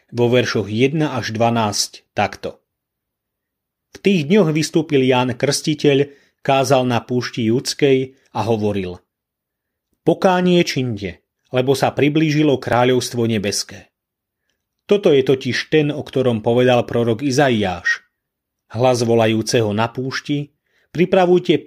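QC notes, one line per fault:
12.73 s and 13.58 s, dropped buffer (overrun): the program likely failed to read its input in time, so the hardware overwrote a block of samples, roughly 5 ms of audio each time, before it was collected. The material on either side of each gap is butted straight together with no silence, so the speech skips forward slightly, the first just after "činde lebo sa priblížilo".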